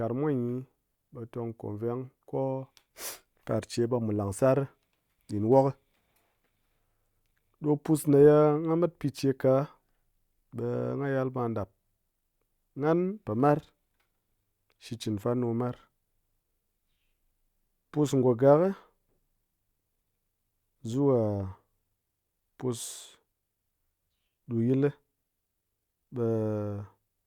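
No technical faults can be heard in this speech, so there is nothing to describe in time order.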